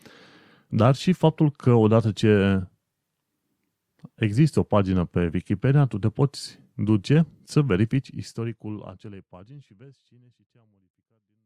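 Nothing goes wrong in this speech clip: it runs along steadily, and the gentle fade-out that begins around the 8-second mark eases the level down smoothly, just as an editor would.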